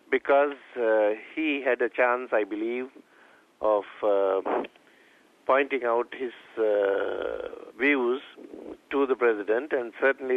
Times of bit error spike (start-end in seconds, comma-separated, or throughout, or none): 1.83, 4.09